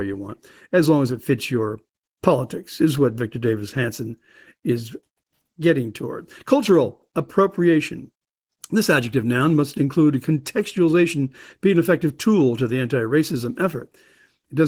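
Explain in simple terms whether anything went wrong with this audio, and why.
The speech sounds hoarse and slightly robotic from start to finish, because Opus voice compression squeezed it into too little data and coded its fine detail coarsely.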